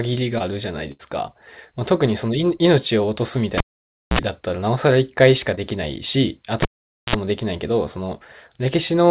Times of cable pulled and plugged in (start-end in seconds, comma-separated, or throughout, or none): 3.58-4.19, 6.62-7.16